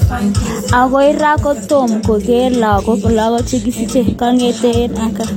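A speech clip with a single-generation codec sound would show one consistent set of compression artefacts, but here two distinct kinds run together throughout. There is the smeared, watery texture of one lossy coder layered with the brighter, synthetic-sounding upper band of another, and nothing above 16.2 kHz. That combination points to transcoding between lossy codecs, likely a Vorbis encode near 68 kbit/s later re-encoded as HE-AAC around 32 kbit/s.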